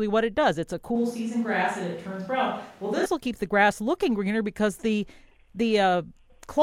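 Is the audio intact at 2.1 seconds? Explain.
No. From 0.96 to 3.06 s the speech turns suddenly roomy, hollow and thin, about 5 dB quieter with more background noise, likely a switch to a distant microphone.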